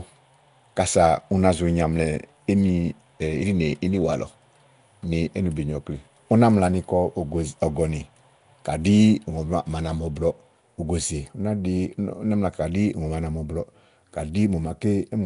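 Throughout, the speech has a rough, hissy halo and a smeared, underwater quality, likely Nellymoser compression, which fits a bitrate near 44 kbps. Starved bands are refilled with noise, so a spectrogram shows speckled noise patches and a hard ceiling at 10.6 kHz.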